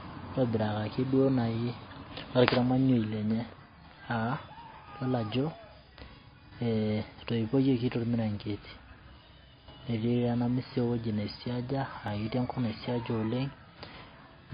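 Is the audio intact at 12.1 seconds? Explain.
No. At 12.08 s there is a block of digital silence lasting about 0.73 ms, a run short enough to suggest roughly 32 samples dropped to zero. The output falls straight to zero and back with no fade, so the sharp edges produce a single tick rather than an audible hole. A fade-based dropout or packet-loss concealment would smear the gap instead of clicking.

Under that tick, the audio has nothing above 5.1 kHz and carries two layers of compression artefacts, likely from transcoding between lossy codecs, a low-rate MP3 later re-encoded as WMA. A single codec would leave only one set of artefacts.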